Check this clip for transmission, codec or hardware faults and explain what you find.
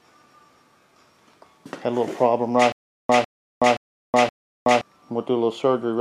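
One transmission fault is present: a stutter with silent gaps from 2.72 to 4.81 s. The same 152 ms burst of sound repeats four times, each followed by 371 ms of digital silence, a steady 523 ms cycle. The likely cause is a stalled stream that replays its last fragment on each retry, then runs empty. A plain dropout would leave one gap. Here the identical fragment returns at an even pace, and the audio meant for that span is lost.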